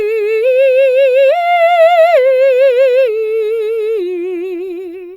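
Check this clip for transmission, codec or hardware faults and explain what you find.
No transmission, codec or hardware faults turn up anywhere in this music clip.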